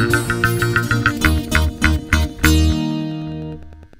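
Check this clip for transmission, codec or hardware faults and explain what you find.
One hardware fault runs through the whole clip: Wi-Fi interference. A nearby Wi-Fi radio's beacon, sent every 102.4 ms, is picked up and rectified by the audio circuit. The result is a steady ticking about ten times a second, roughly 30 dB below the sound.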